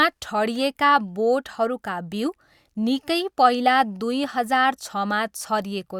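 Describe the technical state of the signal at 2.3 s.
At 2.3 s the speech signal is intact, with no dropout, clipping, glitch or other fault audible at that point.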